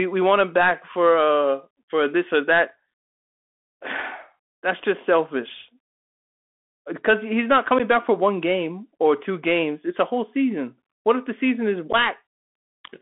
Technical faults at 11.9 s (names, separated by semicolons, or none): Bluetooth CVSD headset codec; unconcealed Bluetooth headset packet loss